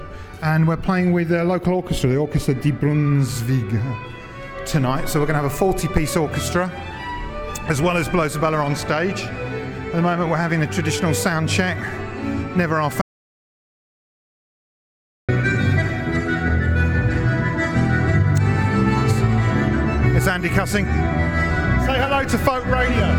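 At 13.02 s the audio cuts off abruptly and the track holds silence, with no room tone, until 15.29 s, when the sound resumes mid-flow. This is an audio dropout to silence lasting about 2.27 s, likely from a momentary loss of the input signal while the recorder kept writing silence.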